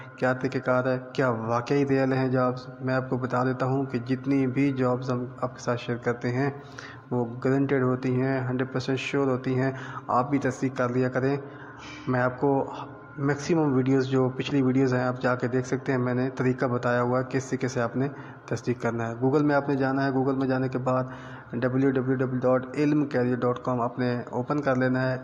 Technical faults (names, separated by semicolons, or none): adaptive stream at a lower bitrate